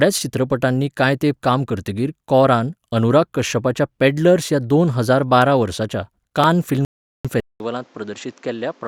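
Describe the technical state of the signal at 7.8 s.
At 7.8 s the speech sounds dull and boxy, a few decibels quieter than before, and with a new background noise sitting roughly 30 dB under the signal. This change begins at 7.40 s, with a 200 ms silence at the switch, and lasts to 8.88 s. The likely cause is an input switched to a poorer device: the recording moved to a narrower-band microphone path with its own tone, level and noise floor.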